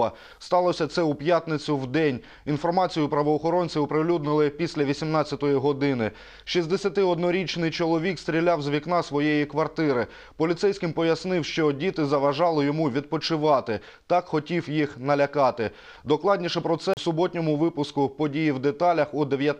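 A CD skip occurs at 16.94 to 16.97 s, near the end of the audio. The playback drops out in a very short mute, heard as a small tick, then carries on from a different point in the material. The break in continuity comes from the laser being thrown off its track, whether by a knock or a flaw in the disc, and landing on another turn of the spiral, so the sound resumes displaced in time.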